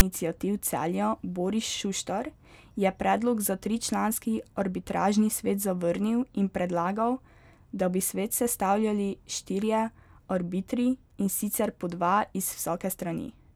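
At 0.00 s the speech opens with a file tags played as audio fault. A block of text metadata was decoded as sample data, giving a very brief, loud rasp with hard edges, offset to one side because text bytes sit unevenly around zero.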